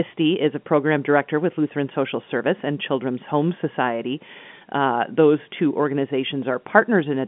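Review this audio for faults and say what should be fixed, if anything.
No faults; nothing needs fixing.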